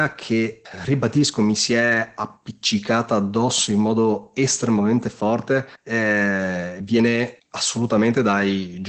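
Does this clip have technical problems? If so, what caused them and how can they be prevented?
Yes: Opus voice compression throughout, audibly hoarse and muffled, nothing above 8 kHz, fitting roughly 12 kbps SILK wideband. Unlike plain low-passing, the excitation itself sounds coarse. Prevent it with a higher bitrate.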